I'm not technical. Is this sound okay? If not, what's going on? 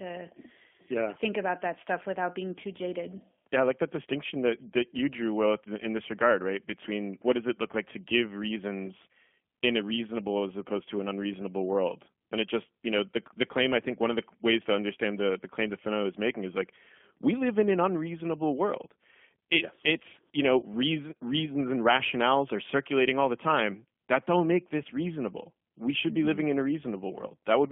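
No. The whole clip goes through a G.729 codec, a squeezed-down phone codec, so the speech sounds thin, slightly rough and a bit robotic, with nothing above about 3.4 kHz. Around 20.60 to 20.64 s there's VoIP packet loss concealed by the speech codec: roughly 20 ms, about what a single lost packet would cost, went missing. The decoder patched the gap by stretching the previous sound, which causes a brief stretched, fading smear.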